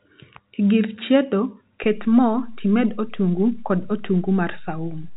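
At 1.84 s, just after "gir chiedo", a DC step shifts the waveform's zero line and holds to the end, heard as a single low thump beneath the telephone-band speech.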